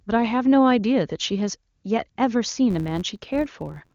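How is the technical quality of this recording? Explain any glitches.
Two kinds of glitch are audible: brief comfort-noise patches in the middle of the speech and a buzz over the final stretch. The AMR wideband (HD Voice) coding itself is clean, with little or no codec damage at 23.85 kbit/s.

AMR comfort noise, at 1.75–1.83 s and 2.09–2.17 s: for about 80 ms each time, the phone stopped sending speech frames, and the receiver filled the gap with synthetic noise built from a rough level and spectrum estimate. The real background briefly becomes a smooth, steady hiss that switches in and out.

Filter restarted on every block, from 2.71 s to the end: a filter loses its state between processing blocks and restarts each one from silence, which puts a small transient at every block start. These repeat at about 86 Hz, which fits a 512-sample buffer, and are heard as a buzz that rises and falls with the speech level.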